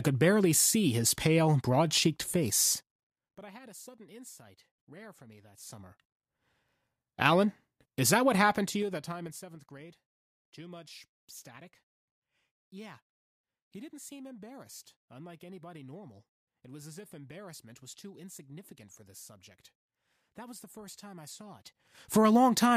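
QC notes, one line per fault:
2.69–3.44 s, zipper noise: after "his pale broad cheeked", the level falls by about 25 dB in unsmoothed 3 dB steps, around ten a second, each jump clicking, until "I had a sudden".
5.48–6.50 s, zipper noise: after "insight rare for me", the level climbs about 25 dB in 3 dB steps, roughly seven a second, ticking as it rises.
8.45–9.57 s, zipper noise: after "is that what", a similar stepped drop of about 20 dB at roughly seven clicks a second.
21.50–22.25 s, zipper noise: a stepped rise of about 20 dB, around ten ticks a second.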